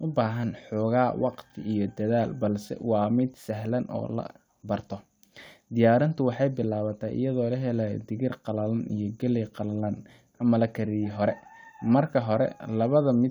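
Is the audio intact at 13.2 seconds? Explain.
Yes, the audio is intact at 13.2 seconds, with no dropout, click, distortion or other fault to be heard at that point.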